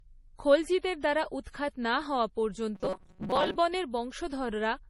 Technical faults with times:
0.00-4.90 low-bitrate audio saved at a high bitrate
2.75-3.56 robotic sound from repeated short buffers

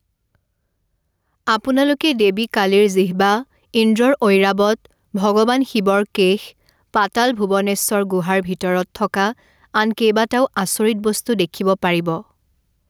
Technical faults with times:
0.00-12.90 gain pumping

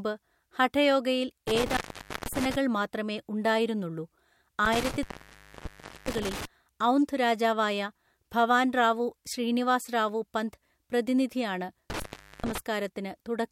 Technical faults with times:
1.48-2.56 intermittent contact
4.65-6.45 intermittent contact
11.90-12.58 intermittent contact

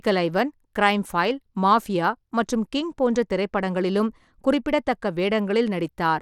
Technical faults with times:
0.00-6.21 Bluetooth SBC compression

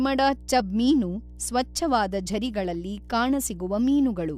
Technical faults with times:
0.00-4.37 mains hum
0.60 compressed frames skipped

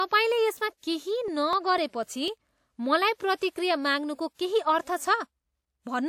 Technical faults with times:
1.03-2.78 periodic USB or driver dropouts
3.37-3.41 pre-echo
4.34-4.39 pre-echo

